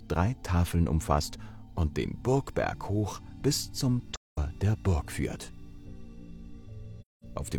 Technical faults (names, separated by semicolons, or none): AAC frame loss with muting